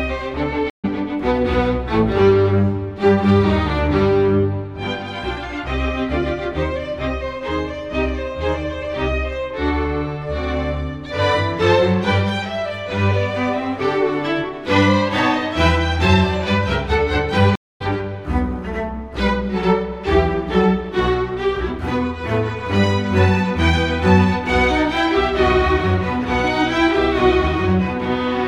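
Right at the start, from 0.70 to 0.85 s, there's a stream reconnect: the link dropped, the player went quiet for 138 ms, then spun up a fresh decoder and picked the audio up further along, skipping a short stretch. It happens again at 17.56 to 17.82 s, with a longer 248 ms gap, and this time the sound comes back roughly a fifth of a second ahead of where it cut out.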